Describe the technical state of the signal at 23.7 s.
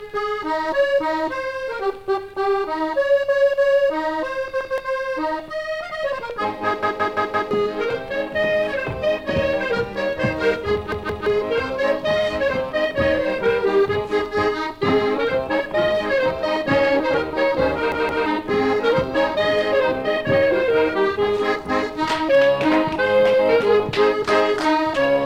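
At 23.7 s the signal is intact, with no audible fault at that moment.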